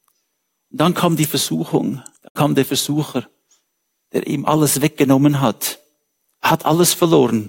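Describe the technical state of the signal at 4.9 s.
At 4.9 s the speech signal is intact, with no audible fault at that moment.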